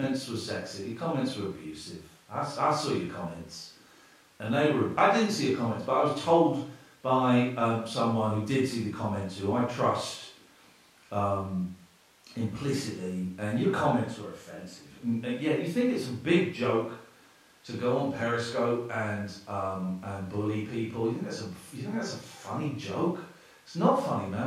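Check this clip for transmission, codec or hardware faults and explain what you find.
The speech signal shows no transmission, codec or hardware faults at any point in the recording.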